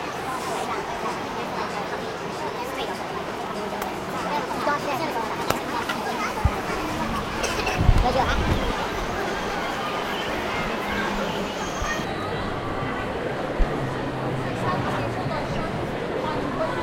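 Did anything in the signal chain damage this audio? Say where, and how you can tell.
Yes. From 0.0 to 12.04 s the sound runs 1.55 times too fast, raising pitch about seven semitones and quickening everything together; it then drops to normal. That joint pitch-and-tempo shift, unlike a pitch shifter's, points to a section likely played at the wrong speed during editing or playback clocking.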